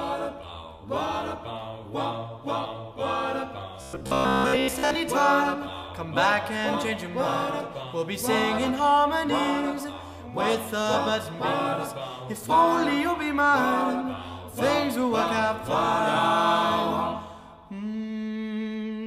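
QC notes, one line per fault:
3.81–4.95 s, robotic sound from repeated short buffers: a rigid 67 Hz metallic buzz, likely from a 15 ms chunk looping over most of the audio; its fixed pitch distinguishes it from plain dropouts.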